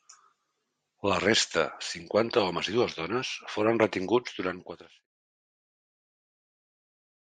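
No technical faults can be heard in this speech. The level eases down in a smooth fade-out beginning at around 4 seconds and reaching silence at 5.07 s, with no click or hard edge.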